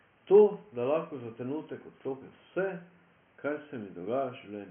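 No technical faults are audible.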